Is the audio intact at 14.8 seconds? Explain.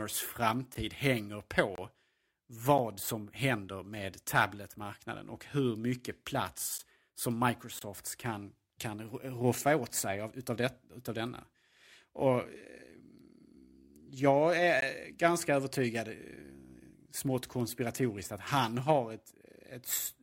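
No, not quite. At 14.81 s there's a gap between stream segments: a hole of about 17 ms, right before "ganska övertygad". Two segment time stamps don't line up, so the player fills the space with silence. That gives a short dropout with hard edges rather than a fade. Nothing is actually missing, though; the sound just resumes a moment later. The timing points to segments about one second long.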